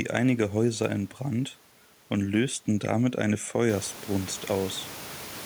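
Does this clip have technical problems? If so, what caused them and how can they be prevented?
No, nothing in this speech clip stood out as a technical problem on listening.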